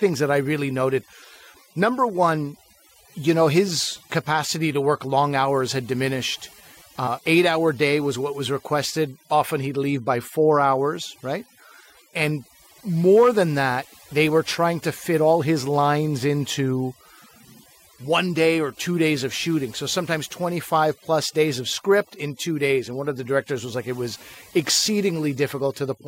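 Throughout the speech, overdone noise removal leaves near-silent gaps flecked with twinkling specks, as aggressive gating strips bands and quiet voice detail.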